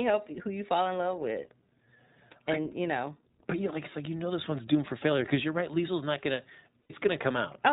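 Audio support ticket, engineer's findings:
iLBC codec, whole clip. Narrowband band-limit, nothing above 4 kHz. Rough, slightly synthetic speech, plainly audible. Each frame's excitation coded independently. Character fits the 15.2 kbps, 20 ms frame mode. Probable component: VoIP codec stage.

Lost iLBC frames, 6.82 to 6.91 s, right after "not gonna". Gap of 80 ms, about four 20 ms frames. Decoder concealment repeats the last pitch cycle with noise added, giving a brief held, buzzy vowel. Speech recovers cleanly at once. Probable component: network packet path.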